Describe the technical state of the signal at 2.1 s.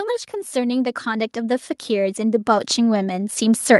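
At 2.1 s the automatic gain control is partway through a slow upward adjustment that began at 0.52 s and continues to 3.79 s. It judged the incoming level too low and keeps raising its gain a little at a time, so the automatic gain rising affects everything it passes. The speech and the background noise beneath it swell together, growing steadily louder across several seconds rather than holding a stable level.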